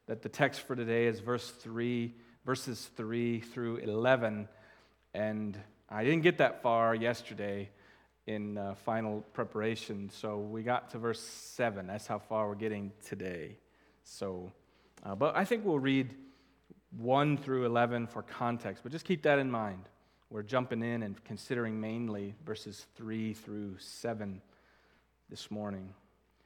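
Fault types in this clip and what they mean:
No fault types appear in this clip, so there is nothing to list or explain.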